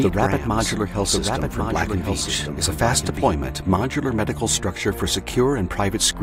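From the very start until 3.28 s, a doubled audio track runs under the sound. A second full-band copy trails the original by about a second, roughly 5 dB quieter, likely because a slower capture path picked up the same audio again. Unlike an echo or reverberation, the lagging copy has no decay, no room colouring, and no further repeats. It stays equally present throughout, then cuts off abruptly at 3.28 s instead of fading away.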